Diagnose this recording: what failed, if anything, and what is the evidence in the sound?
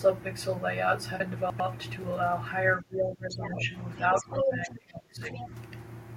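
Chunks out of order at the buffer stage: between 1.2 and 1.6 s a 100 ms chunk lands three chunks late, so the sound jumbles briefly at the hard joins.

Speech suppressed in double talk in call processing: the talker dips by about 15 dB from 2.81 to 3.73 s and about 25 dB from 4.21 to 5.52 s, likely the echo canceller ducking both sides.

Other side's voice leaking through, again in call processing: a second voice sits about 10 dB down at 3.29 to 3.61 s, roughly level at 4.16 to 4.7 s, and about 15 dB down at 5.32 to 5.48 s. Likely residual loudspeaker echo.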